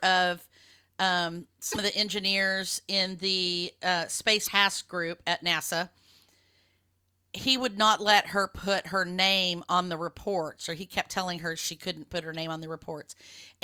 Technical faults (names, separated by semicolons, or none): damaged data in a compressed stream